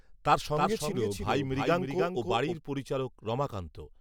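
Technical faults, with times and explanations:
0.41–2.55 s, doubled audio track: A second copy of the speech sits about a third of a second behind the first and about 5 dB quieter. It carries the full frequency range with no decay or room colour, so it sounds like a clean overlaid repeat rather than an echo. It cuts in and out abruptly at both ends. The likely cause is the same signal being captured again through a slower path and mixed back in.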